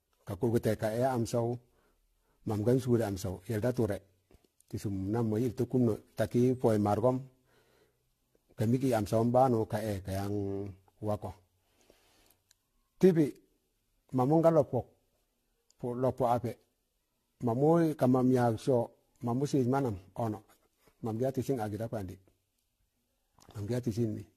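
Throughout the speech, the sound is swirly, hollow and smeared, with softened consonant attacks, likely generation loss from around ten successive AAC-LC passes at roughly 64 kbit/s. A spectrogram shows nothing above 14.2 kHz.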